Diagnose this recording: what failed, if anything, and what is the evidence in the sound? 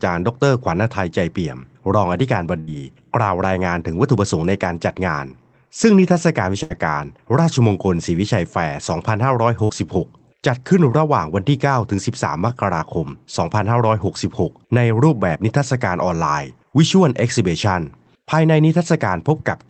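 Network stage, burst of packet loss: at 2.59–2.73 s, 6.63–6.73 s and 9.64–9.72 s, the receiver stretches the last speech for 76, 72 and 51 ms as a decaying buzz or hiss, then jumps ahead with about 60 ms absent. On a spectrogram these show as frozen, fading harmonic bands ending in an abrupt discontinuity.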